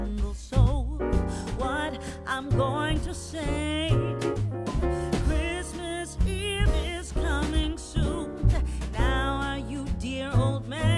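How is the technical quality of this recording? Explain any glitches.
There are no glitches to explain in this recording.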